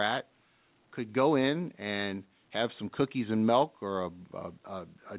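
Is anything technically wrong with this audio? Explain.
No, nothing here is faulty: the speech has simply come through a call path whose A-law coding, likely G.711, leaves nothing above 4 kHz, which is normal for that route.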